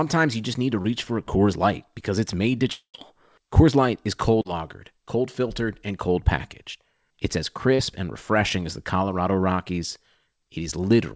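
Brief smears and small wobbles break into the speech at 0.82 s, 4.42 s and 7.75 s, each lasting roughly 40 to 60 ms. These are short concealed packet loss: 20 to 40 ms of audio arrived too late, and the receiver bridged each gap by extending the preceding sound before blending back into the real signal.

At 2.72 s the speech turns into a fading buzz for about two tenths of a second, ends in about 80 ms of silence, and resumes at 2.96 s with the intervening portion gone. This is a long network dropout, likely from no packets arriving for over 200 ms, with the receiver padding the hole by a decaying continuation of the last sound. Throughout the clip nothing is heard above 8 kHz, which fits a G.722 call path at 64 kbps.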